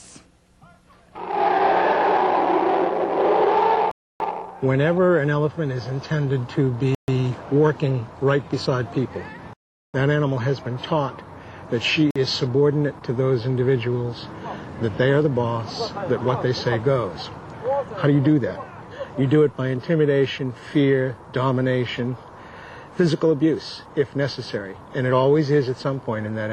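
Four dropouts point to a likely Bluetooth stall: interference delayed packets, the headphones' buffer emptied, and playback halted until retransmitted data arrived. Each time the audio cuts abruptly to dead silence and then resumes. The gaps fall at 3.91 to 4.20 s (288 ms), 6.95 to 7.08 s (134 ms), 9.53 to 9.94 s (406 ms, the longest), and 12.11 to 12.16 s (49 ms, a brief hiccup).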